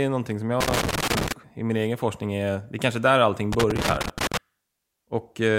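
Loose connector crackle breaks into the speech from 0.60 to 1.32 s and again from 3.53 to 4.37 s, where an intermittent contact chops the signal into irregular scratchy bursts.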